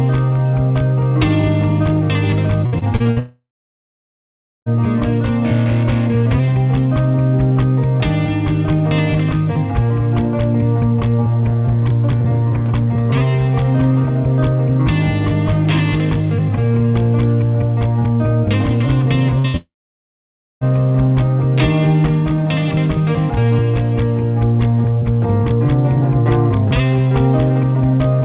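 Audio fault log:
2.66–3.19 s, repeated packet loss (robotic sound): choppy stutter with pieces missing; five gaps up to 64 ms were patched by continuing the last sound, about 38% of the stretch.
3.19–4.69 s, long network dropout: a brief fading tail gives way to about 1.2 s of silence before the sound resumes further on; this is likely a stall in incoming audio, roughly 1.5 s of it never played.
19.39–19.57 s, burst of packet loss (two in a row): short fading fills, with about 60 ms lost in each burst; the receiver stretched the last sound over each gap while turning it down.
19.57–20.64 s, long network dropout: a fading tail and then about 0.9 s of silence before the audio returns without the missing part; likely caused by roughly 1 s of audio never arriving.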